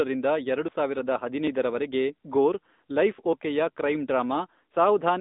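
Speech heard through the AMR narrowband mobile codec at 10.2 kbps: the band runs from 200 Hz to 3.7 kHz, nothing passes above 3.8 kHz, and the codec's buzzy, synthetic coding damage is plainly audible. Jumps ahead in the sound occur at 0.68 s, at 3.33 s just after "ಗೋರ್ ಲೈಫ್", and at 4.74 s, where the skip is longer. The likely cause is a dropped buffer (overrun), where audio was overwritten before being collected.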